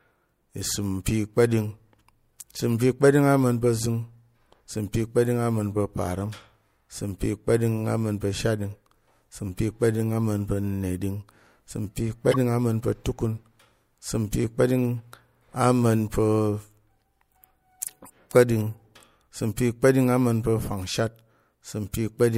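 Corrupt frames decoded in this speech clip: damaged bits in a few compressed frames reached the decoder, which played them anyway, so misread gains and codes threw energy into the wrong frequencies. The result is a short chirp or blip at 6.32–6.34 s, between "kpa̱ɗing ama̱n pa̱ parəm" and "isəm pi"; a much louder burst, peaking around -5 dBFS, at 12.31–12.36 s, after "pa̱ neɗing isəm pi"; and a faint single-frame blip at 21.07 s.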